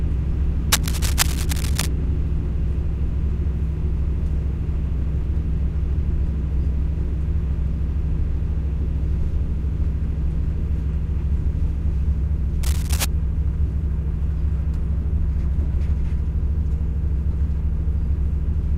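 From 0.72 to 1.88 s, dense, irregular scratching rides over the sound at about 5 dB below it, returning more faintly from 12.63 to 13.05 s at about 10 dB below. This cable scratch noise likely comes from a worn cable or connector whose contact resistance fluctuated as it moved.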